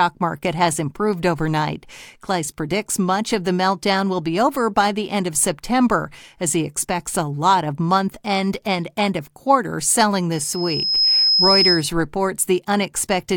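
Loudspeaker feedback squeal starts at 10.31 s, just after "end of quarter selling". A microphone is picking up its own loudspeaker, and the loop gain tops one at 5.1 kHz. That thin tone swells in under a second, rises a few dB above the speech, and stops at 11.88 s.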